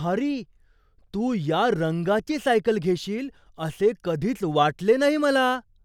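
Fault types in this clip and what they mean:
No fault types are present in this clip.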